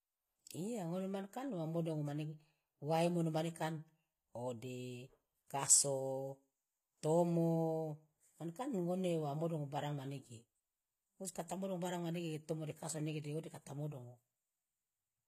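Speech here, and the whole thing has plainly audible HE-AAC compression damage: the s sounds come out gritty and lispy, with metallic treble that's likely rebuilt by band replication rather than coded, nothing above 14.9 kHz, which fits roughly 20 kbps.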